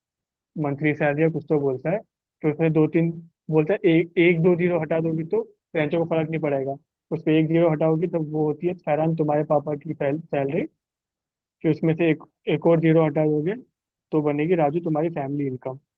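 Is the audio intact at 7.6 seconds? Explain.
No. A short stall from a late packet runs from 7.51 to 7.57 s: the jitter buffer emptied, so the last sound was stretched by 25 ms before playback resumed, adding about 25 ms of delay. Nothing is lost, but a sound is held too long, with a slight buzz or dip. On a spectrogram it appears as flat, smeared horizontal bands; on a waveform, as a repeating stretch of near-identical cycles.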